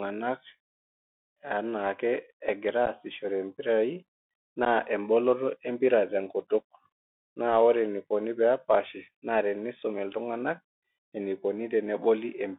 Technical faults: Bluetooth CVSD headset codec; unconcealed Bluetooth headset packet loss

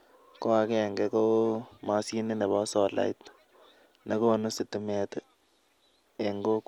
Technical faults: Bluetooth SBC bit pool drop

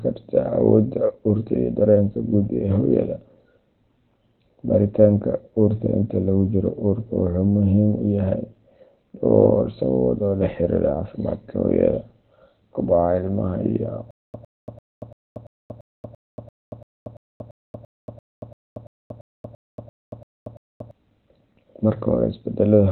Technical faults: Opus compression; stutter with silent gaps

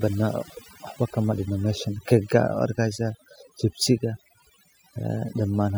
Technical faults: overdone noise removal

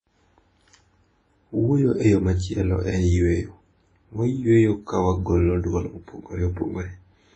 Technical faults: WMA compression

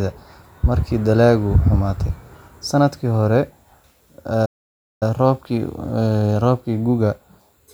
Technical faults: playback stall

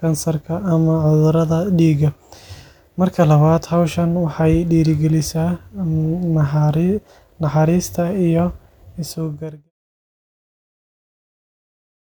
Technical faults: none

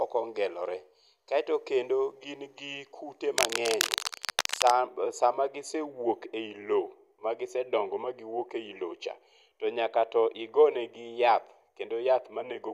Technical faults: cable scratch noise

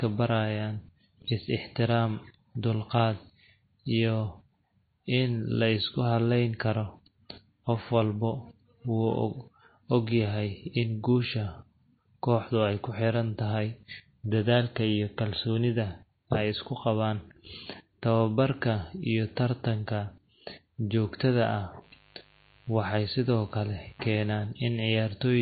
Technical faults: MP3 compression; mains buzz

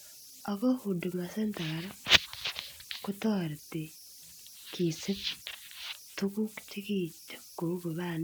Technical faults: converter idle tones

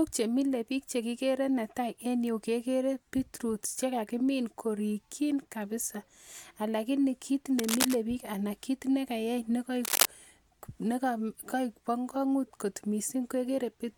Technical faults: cable scratch noise

